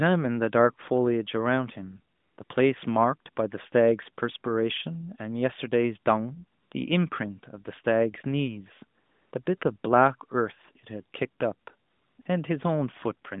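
Speech carried over a narrowband mobile link, with AMR comfort noise filling the pauses at 2.16–2.38 s, 2.44–2.50 s, 6.60–6.72 s, 9.00–9.32 s, 9.44–9.46 s, 9.58–9.62 s, 11.88–12.18 s and 12.22–12.26 s. In each gap the sending phone treated the talker as silent and stopped transmitting speech frames. The receiver then generated a smooth, even hiss from a rough description of the background's level and spectrum, rather than passing the real room sound. What sets this apart from packet loss or a noise gate is that the gaps are never dead silence, clicks or repeated fragments. They are filled with a uniform synthetic bed whose texture changes abruptly where real frames resume, and the short gaps of 20 to 60 ms sound like brief flickers between the two. The AMR-NB codec itself is heard only as a band of about 150 Hz to 3.6 kHz with light coding roughness, consistent with its 12.2 kbps mode.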